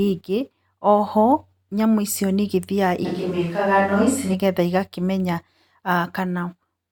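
At 3.07 s the speech suddenly turns roomy and hollow, with thinner bass. It stays that way until 4.33 s, then snaps back just as abruptly. That's a switch to a distant microphone, likely because the close mic dropped out. Loudness barely changes, but room noise comes up, sitting roughly 30 dB under the speech.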